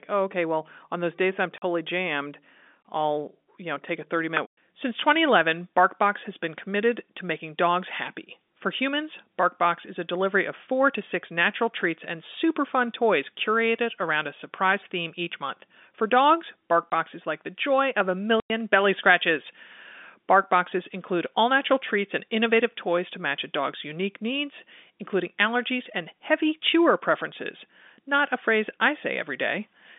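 Hard-edged gaps of dead silence cut into the speech at 1.58 s after "on those days I'm", at 16.91 s before "is like the joy", and at 18.4 to 18.5 s after "the joy of a". This is packet loss filled with silence: lost stretches of 40, 20 and 100 ms, which fits 20 ms packets, are replaced by nothing. The narrow telephone band of the G.711 line stays audible throughout.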